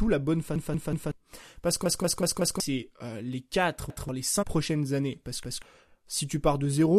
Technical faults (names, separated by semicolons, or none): repeated buffer; compressed frames skipped